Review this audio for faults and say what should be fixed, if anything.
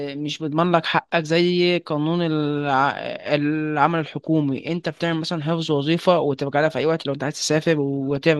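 Throughout the speech there is a dull, gurgling graininess, likely from MP2 compression at a starved bitrate (the damage fits roughly 80 kbps): Layer II drops upper sub-bands and coarsely quantises the rest. A spectrogram shows blocky high-frequency bands flickering on and off. Encode at a higher bitrate or keep an uncompressed master to prevent this.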